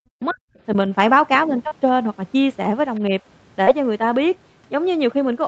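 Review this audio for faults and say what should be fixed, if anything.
Speech suppressed in double talk, 0.01 to 0.39 s and 3.08 to 3.14 s: the speech drops away deeply at the start, then dips slightly later, likely because the echo canceller ducked the talker while the far side spoke.

Short concealed packet loss, 1.67 to 1.73 s and 3.63 to 3.69 s: about 40 ms of audio never arrived, and the decoder extended the previous sound into each gap, leaving a brief smear.

Other side's voice leaking through, 2.95 to 3.00 s: a very faint scrap of a second voice likely slips past echo cancellation from the loudspeaker into the microphone.

Use a headset or a better-tuned echo canceller with proper double-talk detection, and steady the network path or add forward error correction to reduce packet loss.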